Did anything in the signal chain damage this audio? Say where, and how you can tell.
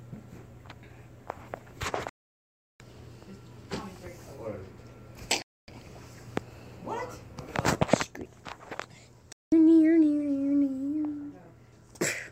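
Yes. The broadcast reception chain lost data three times, producing a digital broadcast dropout at 2.09 to 2.80 s, 5.42 to 5.68 s and 9.32 to 9.52 s. When incoming frames went missing or failed their checksum, the receiver muted. Each hole opens with a fade of about 3 ms, so the sound drops to silence almost instantly and returns just as abruptly. The gap lengths of roughly 0.7, 0.26 and 0.19 s fit whole frames of about 32 ms. The audio sent during those gaps is simply gone.

From 8.04 s to the end, one channel drops out: the overall level falls abruptly by about 6 dB and stays down. That step is what you hear when content shared by both channels loses half its contribution in a mono sum. The likely cause is one leg of the stereo path, such as a connection or channel feed, going dead ahead of the fold-down. Anything carried only in that channel vanishes with it.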